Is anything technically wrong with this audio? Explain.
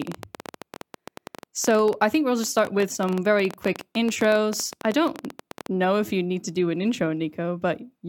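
Yes. From 0.02 to 5.67 s, a train of clicks ticks unevenly through the speech and its pauses, around seventy sharp pops at about 11.7 per second, peaking roughly 10 dB above the voice. The likely cause is interference or a faulty connection or power supply injecting repeated pulses.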